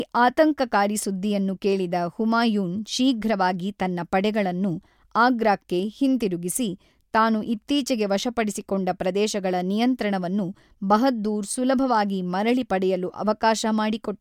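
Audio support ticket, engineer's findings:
No faults found on listening; ticket closed.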